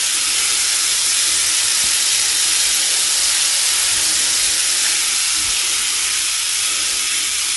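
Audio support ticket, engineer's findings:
Throughout: grainy, rough texture with noise filling spectral gaps; nothing above 11.6 kHz. Likely low-delay AAC compression (AAC-ELD); short frames smear fine spectral detail, consistent with around 32 kbps.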